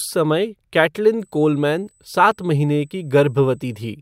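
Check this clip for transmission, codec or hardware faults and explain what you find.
One hardware fault is present: USB whine, from 1.19 s to 3.87 s. A steady, faint tone at 8 kHz, strongest at its 16 kHz harmonic, sits roughly 40 dB below the speech. It comes from current drawn in the bus's 125-microsecond microframes leaking through power or ground. Its fixed pitch in the high kHz range marks it as USB whine rather than low-pitched mains hum.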